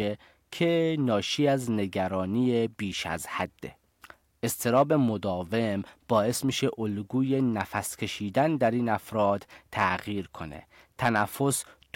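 Hard clipping hits the speech at 4.67–4.82 s, 7.61–7.78 s, 9.79–9.85 s and 11.05–11.23 s. Peaks exceed the stage's limit by about 2, 3, 3 and 7 dB and are sliced flat. Each burst crackles on the peaks, roughest at the end.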